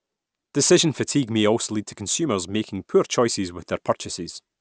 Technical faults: aliasing

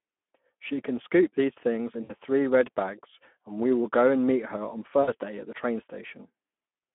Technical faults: Speex codec; VoIP packet loss concealed by the speech codec

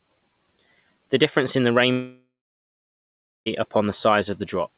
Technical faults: long network dropout

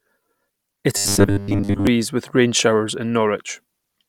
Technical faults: robotic sound from repeated short buffers

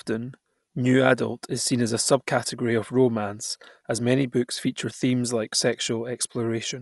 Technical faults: Dolby Digital compression

